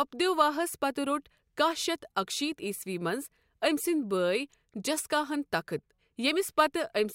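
Nothing here calls for comment: the speech runs along without a single technical fault to point out.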